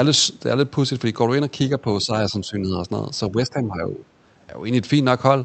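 From 2.03 to 2.81 s and again from 3.31 to 4.06 s, the speech dips by a few decibels and then by about 10 dB, likely speech suppressed in double talk, with the echo canceller attenuating the near talker during overlap. The call path's roughly 8 kHz audio bandwidth stays audible throughout.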